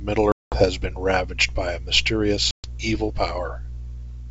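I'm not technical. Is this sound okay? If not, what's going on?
No. Around 0.32 s and again at 2.51 s, chunks of the call's data went missing, which is packet loss on an ADPCM call. The line goes abruptly silent for about a fifth of a second, then just over a tenth. Afterwards the speech comes back briefly with some roughness, because the receiving end's running guess of the sound had drifted from the sender's and needed a moment to catch up.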